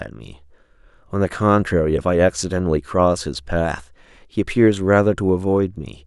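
No technical faults can be heard anywhere in the recording.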